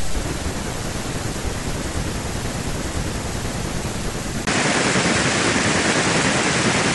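At 4.45 s the speech suddenly loses its top end and stays that way to the end. Everything above about 10.1 kHz is gone, there's a brief 20 ms gap right at the change, the level shifts by roughly 5 dB, and a new noise floor creeps in around 40 dB below the voice. That combination most likely means the input switched to a poorer device mid-recording, one with a narrower band and its own hiss.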